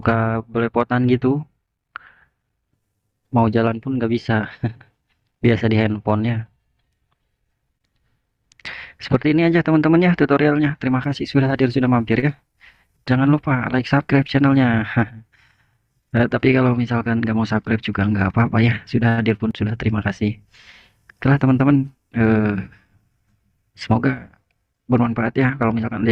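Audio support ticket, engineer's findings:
Short stall from a late packet, 12.19–12.26 s and 19.09–19.20 s. Jitter buffer underrun; the receiver held the last sound 32 ms and 87 ms, with nothing lost, adding that much delay each time.

Jitter buffer speed-up, 21.13–21.35 s. Excess buffered audio trimmed by cutting repeated pitch-period pieces, about 40 ms in total. Playback runs at 115% speed at unchanged pitch and sounds hurried.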